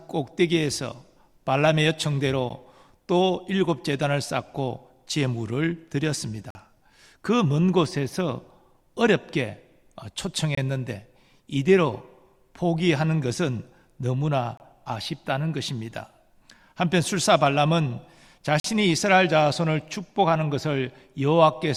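Short hard-edged dropouts of silence, roughly 10 to 46 ms, break the audio at 2.5 s, 6.50–6.55, 10.55–10.57, 14.57–14.60 and 18.60–18.64 s: a gap between stream segments, where timestamps of consecutive 4-second segments leave holes the player fills with silence.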